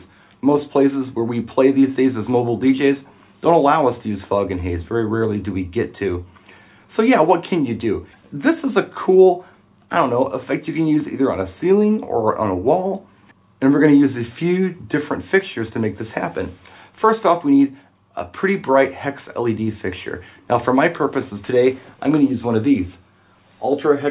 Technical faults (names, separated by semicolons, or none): none